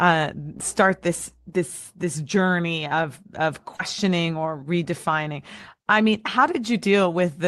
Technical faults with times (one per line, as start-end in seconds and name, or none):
0.00-1.50 mains hum
0.57-0.60 short concealed packet loss
3.76-3.80 short concealed packet loss